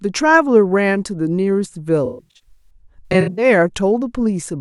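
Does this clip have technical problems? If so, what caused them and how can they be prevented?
Yes. AAC frame loss with concealment, 2.05 to 3.45 s: scattered lost frames were rebuilt from the last good spectrum, sounding smeared and phasey, with blurred spectrogram smears and waveform dips. Forward error correction or retransmission on the stream would prevent it.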